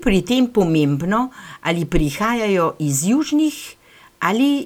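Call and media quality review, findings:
Nothing to flag on this speech recording; no audible faults turned up anywhere, so there's no ticket to raise.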